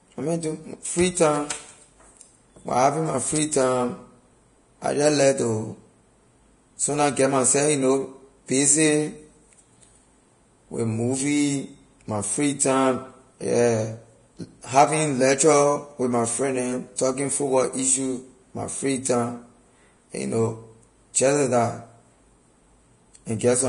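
Vorbis compression runs throughout the speech: nothing sounds above 10.6 kHz, and the remaining treble is hissy and grainy, with roughened tones and smeared consonant attacks. This heavy damage likely comes from coarse treble quantisation, which fits a bitrate near 31 kbps.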